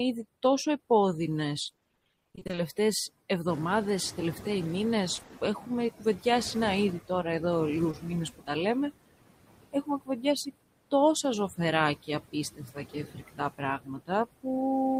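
Overdone noise removal runs through the whole recording. The reduction was set far too strong, so any frequency band close to the noise estimate is pushed almost to nothing, and the quiet parts of the speech go with it. Between phrases the background drops to near silence dotted with twinkling specks. What sets this apart from ordinary suppressor behaviour is the isolated, glittering residue left behind.

Noise suppressor artifacts are present throughout as well. The suppressor takes about 20 dB off whatever it treats as steady noise, working frame by frame. The noise therefore sinks in the gaps and returns underneath the speech. The sign of this fault is the breathing of the noise floor in step with the speech. Isolated specks are a different thing and belong to the overdone removal.

From 1.63 to 2.59 s there is repeated packet loss with robotic sound. Gaps of around 20 ms arrive one after another, and roughly half of the stretch is patched by extending the previous sound. 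The result is choppy speech with pieces missing. A shorter burst of the same kind falls at 5.15 to 5.31 s. What marks this as packet loss rather than suppression is the steady chop, not a change in level.

From 3.47 to 5.87 s the suppressor is catching up. The room noise jumps by about 11 dB at around 3.5 s and then sits about 13 dB below the speech. The noise estimate lags behind this jump, so the louder background passes through with little reduction at first. Over about 2.4 s it settles as the suppressor applies roughly 11 dB of cut. The clue is the slow fade of the noise.

Speech cut by the noise suppressor first appears at 5.98 to 6.26 s, just before "να ήδη τώρα εδώ". About 0.1 s of soft sound is pulled down by about 11 dB and comes out swallowed. It returns at 9.72 to 10.25 s, where around 0.3 s drops by up to about 21 dB. At 12.56 to 13.62 s about 0.4 s is lowered by up to about 17 dB, and at 13.78 to 14.11 s around 0.3 s is lowered by up to about 20 dB. 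Here parts of the speech go faint, whereas packet loss would smear or buzz.

At 7.91 to 7.95 s, just after "να ήδη τώρα εδώ", there is a short concealed packet loss. About 20 ms never arrived and was filled by continuing the previous sound before blending back into the real audio. It is heard as a single brief smear or wobble. That one isolated event is what separates it from the rapid, repeated chopping of the robotic stretches.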